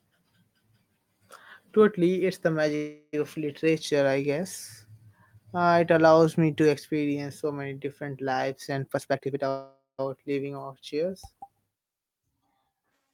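Right after "it's the", from 2.75 to 3.15 s, there's a call audio freeze. Packets were likely held up and the jitter buffer ran dry, so the last sound carries on as a fading buzz for about 374 ms, with only a very short silence. Nothing is lost, and the speech resumes where it stopped.

From 8.88 to 9.46 s, after "many different lives and", a jitter buffer speed-up squeezes out about a third of a second in small pitch-period slices. The speech runs at 146% speed with its pitch unchanged, so it sounds rushed.

Straight after that, from 9.49 to 10.00 s, a second freeze, again likely from stalled packets, stretches the sound into a fading drone for about 496 ms, including about 150 ms of silence, before "leaving our chairs" picks up intact.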